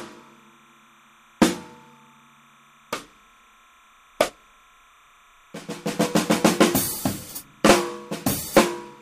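Timecode bleed runs through the whole clip, from start to finish. A linear timecode signal has leaked in from a neighbouring track or cable. That code is a square wave that flips between two pitches, here near 1 and 2 kHz. The flipping rate fits 29.97 frames per second. It sits far below the main sound, roughly 35 dB down. It is heard as a faint, steady chirping warble behind everything.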